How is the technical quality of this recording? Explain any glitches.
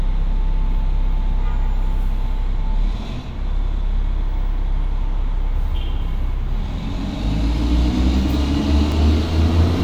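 One glitch is audible. At 8.92 s there is a block of digital silence: a 2.9 ms run of zeros, consistent with a missed 128-sample buffer, cut in abruptly and heard as a single tick.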